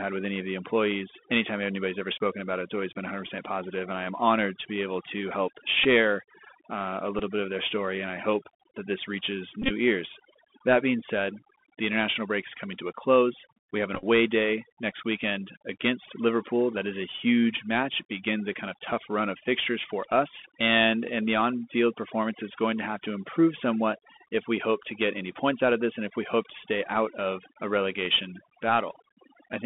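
Throughout the clip the speech has passed through the Bluetooth CVSD headset codec. Its one-bit up/down tracking with an adapting step fits the 64 kbps CVSD link, and the line is confined to about 200 Hz to 3.5 kHz. The damage is plainly audible: s sounds turn scratchy, loud high sounds distort, and a granular hiss sits under the speech.

Overdone noise removal also runs throughout. The reduction was set too strong, so frequency bands near the noise estimate are pulled down or shut off, taking quiet parts of the speech with them. The background breaks into twinkling, warbling specks.

A Bluetooth headset packet repeated occurs four times. When packets failed, the chip decoded the previous packet again. At 5.84 s and 7.19 s, about 11 ms and 7.5 ms were lost. From 9.62 to 9.70 s, about 60 ms is lost scattered across 82.5 ms, with the longest repeating run around 30 ms buzzing near 267 Hz. 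From 13.95 to 14.04 s, 45 ms is lost in short runs of around 10 ms.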